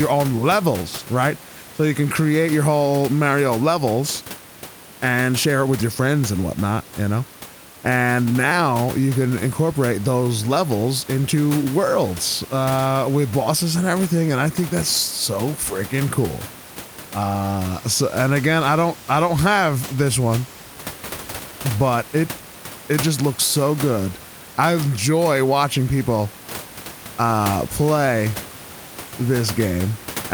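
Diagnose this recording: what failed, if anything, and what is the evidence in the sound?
Nothing in the chain has failed: the speech carries through with no stage showing a defect, and the only other sound is the room's own background noise sitting about 16 dB below the voice, which belongs to the recording environment.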